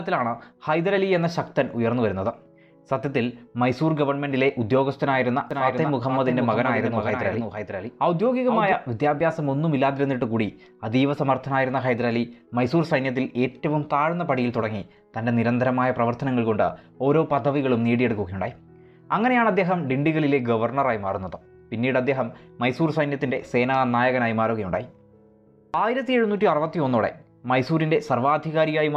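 A doubled audio track runs from 5.51 to 8.73 s: a second full-band copy trails the sound by about half a second, roughly 5 dB quieter, with no decay or room colour, and starts and stops abruptly, likely from a slower capture path mixing in a late duplicate.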